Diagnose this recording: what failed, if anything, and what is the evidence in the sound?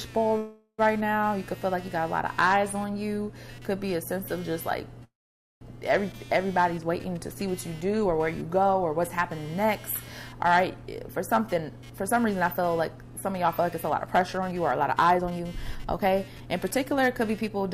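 Computer activity noise, from the analogue wiring, runs through the whole recording: a buzzing chirp pulsing at around 200 Hz, roughly 25 dB below the signal. Processor or peripheral load currents disturb the shared audio ground. Unlike mains hum, it follows the machine's activity rather than a fixed 50 or 60 Hz series.

Hard clipping happens at the converter or a sample-format stage. The signal is overdriven by about 7 dB, so a small fraction of peaks are cut flat, adding high harmonics heard as crackle on loud moments. Soft limiting would round those peaks instead of fracturing them.

There are two call audio freezes, from 0.37 to 0.80 s and from 5.04 to 5.63 s. Each time the sound is stretched into a fading buzz, lasting about 0.41 s and 0.57 s, and the second ends in roughly half a second of silence. Nothing is lost afterwards. Instead the audio resumes where it stopped, so a delay is added. 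That is the mark of a likely network stall that emptied the jitter buffer, not packet loss, which would drop audio.

Jitter buffer speed-up, in call processing, runs from 10.83 to 17.64 s. The sound plays at 114% speed with unchanged pitch, as repeated pitch-period cuts remove about a second of accumulated backlog. A resampling or clock error would shift pitch along with tempo.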